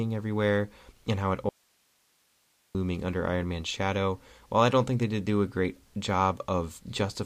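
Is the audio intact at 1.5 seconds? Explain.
No. Just after "everywhere and how it", the speech cuts abruptly to faint hiss about 40 dB down from 1.49 to 2.75 s, an audio dropout to a faint residue, likely from signal loss upstream.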